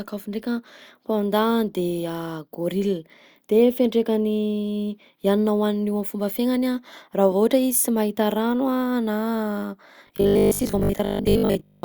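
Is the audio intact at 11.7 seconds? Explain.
No. From 10.07 to 11.83 s the speech turns into a rigid, metallic buzz pitched at 50 Hz, roughly following the words: robotic sound from repeated short buffers. The likely cause is audio arriving too seldom, so playback loops the last 20 ms and skips about 70% of the real signal.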